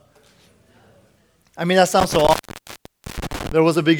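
Intermittent contact runs from 2.00 to 3.52 s, right after "I mean that": a loose plug or cable breaks the circuit, so the speech drops out with crackle at each edge. One opening lasts about 0.84 s, leaving faint hiss underneath.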